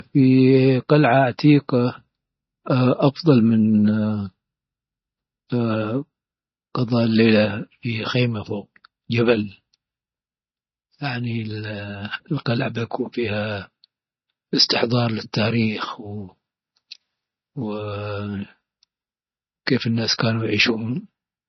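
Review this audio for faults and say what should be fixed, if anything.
MP3 compression, likely at a low bitrate around 24 kbps, affects the whole recording. Speech sounds watery and swirly, s sounds chirp metallically, and attacks smear. A spectrogram shows a hard ceiling at 6 kHz, with weak components flickering on and off between frames. Encode at a higher bitrate, or keep a lossless master for any further processing.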